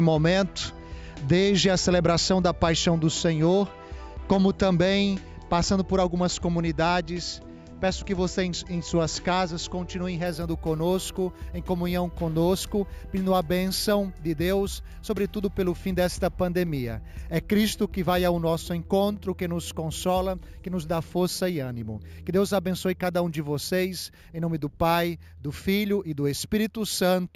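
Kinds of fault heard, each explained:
Imaging from sample-and-hold upsampling: the rate was raised from 16 kHz to 48 kHz by repeating each sample with no smoothing filter, leaving a mirrored copy of the spectrum between 8 kHz and 16 kHz, about 19 dB down, heard from 10.26 s as a bright metallic fizz tracking the sound.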